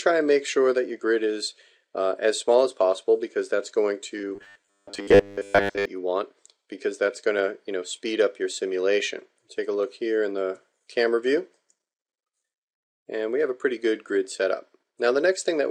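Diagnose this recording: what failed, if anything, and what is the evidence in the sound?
From 4.18 to 5.85 s, robotic sound from repeated short buffers: a rigid 100 Hz buzz, likely a starved driver buffer replaying 10 ms chunks, visible as even 100 Hz harmonic stripes.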